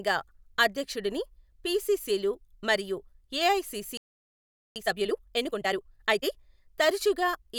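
At 3.97 s the speech just stops dead and the output sits in silence until 4.76 s, a gap of about 0.79 s. That's a playback stall. Most likely the player ran dry on incoming data or its output thread got held up, so there was nothing to send to the speakers until it recovered. You hear the talker cut off mid-flow, then a hole in the audio.

Right at 4.76 s it picks back up, but in a hurry. Through to 6.32 s the speech runs at about 1.5 times normal speed, which is time-compressed catch-up. The player is working off the backlog that built up during the gap by snipping out small slices and cross-fading across the joins. Pitch stays where it should, so it doesn't sound chipmunky, just rushed.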